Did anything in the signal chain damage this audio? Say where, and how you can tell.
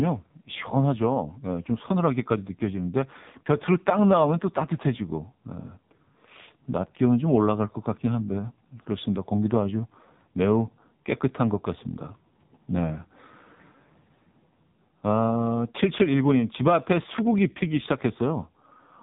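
Yes: AMR narrowband mobile codec throughout, at the codec stage. Nothing above 3.8 kHz survives, and sparse pulse modelling makes the speech heavily buzzy, which fits roughly 5.9 kbps.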